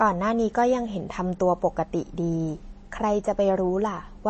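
From start to finish the speech has a watery, swirling texture, with sibilants turning metallic and chirpy and consonant attacks smeared. The damage is plainly audible and is likely MP3 compression at a starved bitrate, which fits roughly 32 kbps. On a spectrogram the energy stops dead at a flat ceiling near 8.3 kHz, and below it weak frequency bands flicker on and off between frames, leaving a patchy, holed pattern instead of smooth harmonics.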